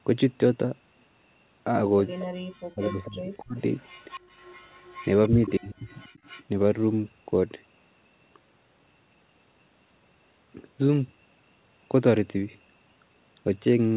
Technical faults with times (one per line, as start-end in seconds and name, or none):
2.19-2.23 echo leak
2.41-3.57 speech suppressed in double talk
3.77-5.05 echo leak
5.29-5.75 speech suppressed in double talk
5.88-6.44 echo leak
6.09-6.22 background gated by the echo canceller